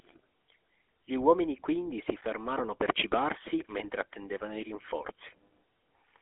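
GSM full-rate codec damage runs through the whole of this speech recording, from the first moment to the last. The sound has been squeezed into a telephone band of roughly 300 Hz to 3.4 kHz, with nothing at all above 3.8 kHz, and the plainly audible buzzy, gravelly grain is what you get when a vocal-tract model is excited by a sparse, regular pulse train rather than the real signal, which fits a 13 kbps GSM full-rate encode.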